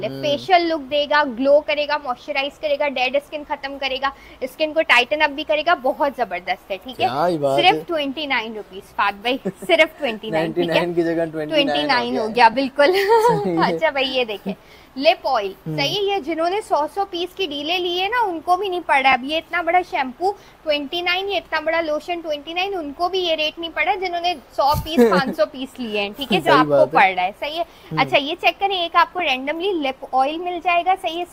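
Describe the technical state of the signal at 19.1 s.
At 19.12 s one lost LE Audio frame, about 7.5 ms, was concealed by the LC3 decoder replaying the previous spectrum with randomised signs, giving a brief noisy smear; on a spectrogram, a thin blurred vertical stripe.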